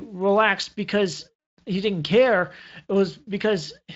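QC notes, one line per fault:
Nothing stood out on listening to this speech clip.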